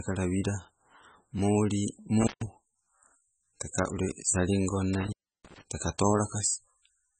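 All the way through, the speech has that watery, swirly quality with smeared attacks, and nothing comes through above 9 kHz. That's heavy damage, and it's likely MP3 compression, consistent with a very low bitrate around 16 kbps, with weak frequency lines dropping in and out between frames.

Then there's intermittent contact, where a loose cable or plug opens briefly. Between 2.21 and 2.47 s the sound cuts out for about 143 ms, and between 4.94 and 5.61 s it's gone for about 323 ms, breaking up with crackle at the edges.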